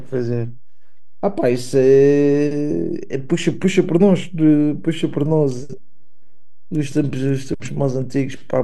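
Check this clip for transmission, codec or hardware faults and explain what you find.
One fault turns up, running the whole way through the speech: a DC offset. The waveform sits shifted off zero by a constant of about -27 dBFS. You won't hear it as such, but it eats headroom and leaves steady energy pinned at the very bottom of the spectrum.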